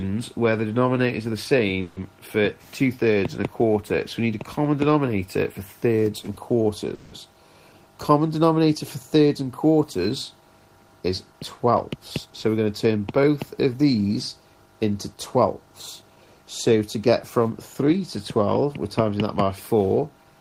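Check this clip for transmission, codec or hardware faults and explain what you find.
Two kinds of network delay fault are audible, each occurring twice.

Call audio freeze at 1.81 to 1.99 s and 6.94 to 7.15 s: packets were likely held up, draining the jitter buffer. The last sound stretches into a fading buzz for 0.15 s and 0.18 s, then resumes intact.

Jitter buffer speed-up at 12.26 to 13.85 s and 16.02 to 18.01 s: an overfull buffer was trimmed by cutting tiny pitch-period slices. The sound rushes at 110% and 108% speed, pitch unchanged, losing around 150 ms each time.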